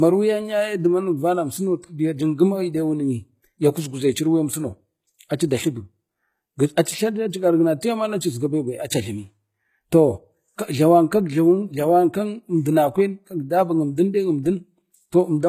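From start to finish the speech carries plainly audible codec damage, likely from HE-AAC compression. The sound points to a very low bitrate, near 20 kbps, where only the lower spectrum is coded and the treble is rebuilt by copying lower bands upward under a coarse envelope. The rebuilt top end stays bright but its harmonics don't line up with the real ones, so s sounds come out gritty and lispy, and nothing remains above 14.9 kHz.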